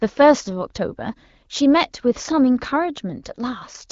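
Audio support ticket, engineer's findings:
Nothing to flag on this one; it's speech carried over an AMR wideband (HD Voice) path, with the top end stopping a little above 7 kHz and only the light coding texture you'd expect from a mid-to-high rate, which fits normal HD Voice behaviour.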